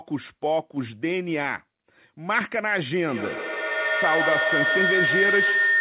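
At 3.08 s a feedback howl starts and runs to the end of the clip. Two devices in the same room are sharing the call, and the sound loops from loudspeaker to microphone, gaining level each trip. The repeats grow rather than fade. They narrow to a tone around 2 kHz, which sits inside the 4 kHz band that points to a G.711 call path. The loop comes round roughly every 150 ms, and the howl peaks about 3 dB above the speech.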